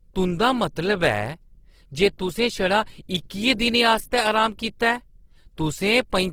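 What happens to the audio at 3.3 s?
At 3.3 s the speech carries plainly audible Opus compression damage, which runs through the whole clip. The sound is grainy and rough rather than swirly. This likely comes from Opus in its music mode at a low rate, which fits about 16 kbps. That mode keeps each band's energy but refills starved bands with folded or noise-like content.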